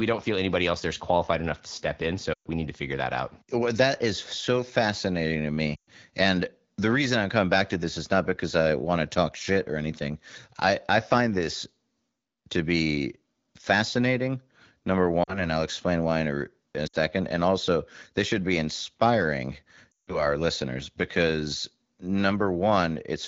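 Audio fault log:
2.33–2.48, 5.75–5.89, 15.24–15.45, 16.87–16.96 and 19.91–20.26 s: lost AMR speech frames. The decoder repeats the last good pitch and spectral shape at falling gain, so the sound smears, then fades. Spectrograms show frozen, dimming harmonics; waveforms show a tapering envelope.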